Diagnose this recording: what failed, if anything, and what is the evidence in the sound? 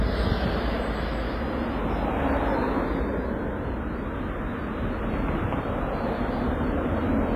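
The codec stage is the likely failure: the sound was squeezed through WMA compression at a very low rate, consistent with around 24 kbps. Throughout the 7-second recording, nothing survives above 15.5 kHz, and the damage is heavy. Quantisation noise smears over each long transform block, so sharp events ring and wash out, and quiet spectral detail is discarded, leaving a hiss that swells and fades with the signal.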